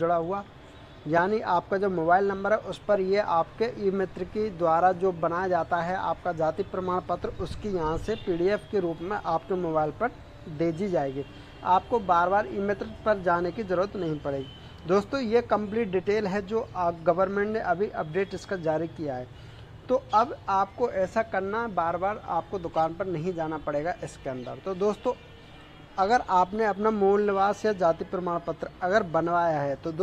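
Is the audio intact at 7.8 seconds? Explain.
Yes, the audio is intact at 7.8 seconds, with no dropout, click, distortion or other fault at that point.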